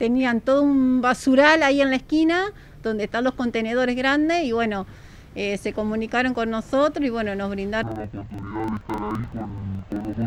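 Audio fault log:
7.83–10.27 s, interleaved audio read as planar. The sound drops an octave, doubled and choppy. Each 42.67 ms block, which fits 2048-sample blocks, is split into halves. Both play at half speed, so pace holds. Chopping repeats at 23.4 Hz.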